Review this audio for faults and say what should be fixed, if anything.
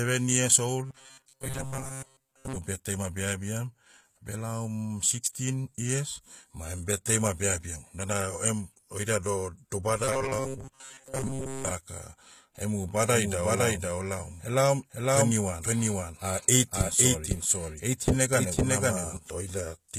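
HE-AAC compression runs through the whole speech clip. The damage is plainly audible and nothing sits above 14.9 kHz. The likely cause is spectral band replication at a low bitrate, around 20 kbps. The treble is rebuilt from copied lower bands, so its harmonics misalign and sibilants sound gritty and metallic. Encode at a higher bitrate, or use plain AAC.

Robotic sound from repeated short buffers appears from 0.86 to 2.58 s, ending just before "birthday ma beabiam", and again from 10.04 to 11.71 s. A rigid 133 Hz buzz is imposed on the speech. It likely comes from one roughly 7.5 ms buffer being replayed while most of the real audio is skipped. Enlarge the buffer or fix the delivery timing.

A doubled audio track runs from 13.09 to 19.17 s. A full-band copy at about the same level trails by roughly half a second. It has no room colour, and it starts and stops abruptly. The likely cause is a second, slower capture path or two misaligned copies in an edit. 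Remove the duplicate path before mixing.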